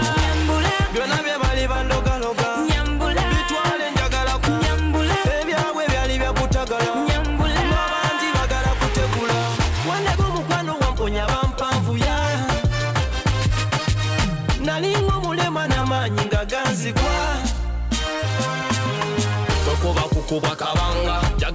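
At 4.48 s the sound jumps abruptly forward with no gap, about 0.7 s of audio missing. This skip ahead happened because a stretch of audio was dropped while later audio was already waiting.

From 6.50 to 7.48 s, 10.15 to 11.90 s and 12.93 to 15.54 s, the sound runs faster, about 6%, 6% and 4% fast, with unchanged pitch. This jitter buffer speed-up comes from the receiver repeatedly trimming short pitch-period slices to drain excess buffered audio, roughly 0.07, 0.1 and 0.1 s in total.

Throughout, nothing is heard above 8 kHz, which fits a wideband call codec such as G.722.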